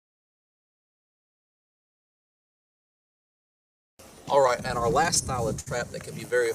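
Between 4.47 and 5.68 s the audio hits repeated stalls (stutter): ten short hitches, the longest about 62 ms, where late packets drained the jitter buffer and the last sound was extended to fill roughly 151 ms. A spectrogram shows smeared, frozen frames, and the waveform shows fading repeats where the waits were longer.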